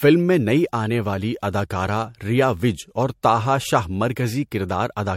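A short speech recording carries generation loss from start to finish: the sound is swirly, hollow and smeared beyond what a single lossy pass would leave, with blurred attacks. The likely cause is repeated MP3 encoding, around four passes at a rate consistent with 64 kbit/s, each re-quantising on a shifted frame grid. A spectrogram would show a hard ceiling at about 16.6 kHz, patchy holes below it, and onsets softened in the waveform.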